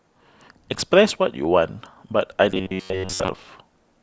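From 2.52 s to 3.28 s the speech collapses into robotic sound from repeated short buffers: a rigid, metallic buzz at a fixed pitch of 94.1 Hz that still loosely tracks the syllables. That pitch corresponds to a loop of about 10.6 ms. The likely cause is new audio arriving too seldom, so the same fragment is replayed to fill the gap. Repeats make up most of this stretch, and the genuine audio behind them is lost.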